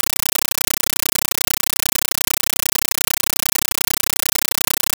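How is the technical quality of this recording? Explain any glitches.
The technical quality is very poor. The speech is replaced for the whole clip by harsh, loud static. The fault is a compressed stream played as audio. A Dolby Digital (AC-3) bitstream has been treated as ordinary samples instead of being decoded. Each coded frame comes out as a noise burst about 9.33 ms long, then silence from the padding. The bursts repeat 31.25 times a second. The result is a very loud, chattering buzz in place of the speech.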